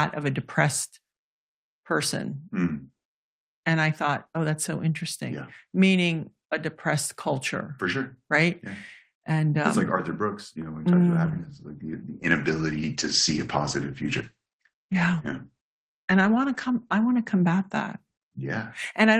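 At 11.27 s, just after "he talks mm about", the call bitrate drops: the bandwidth estimate falls and the encoder is pushed from about 32 kbps down to about 12 kbps, holding at the floor for 5.5 s. With so few bits, Opus quantises the speech coarsely and narrows the coded band from 20 kHz to 8 kHz. The speech turns muffled, rough and watery until the rate recovers at 18.33 s.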